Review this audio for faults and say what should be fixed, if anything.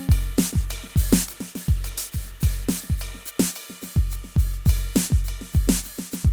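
From 0.36 to 5.33 s the music turns coarse and muffled: a call bitrate drop from 48 to 18 kbps, with high frequencies cut, lowest for 2.41 s. Prevent it with steadier bandwidth estimation or a higher bitrate floor.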